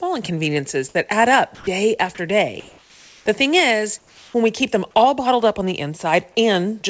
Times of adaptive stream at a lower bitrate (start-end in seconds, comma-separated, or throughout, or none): none